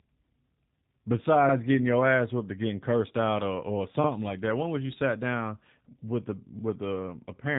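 G.729 codec damage runs throughout this speech clip: the rough, synthetic timbre, consistent with an 8 kbit/s G.729A encoding, rebuilds the voice from a filter and sparse pulses, and nothing passes above 3.8 kHz.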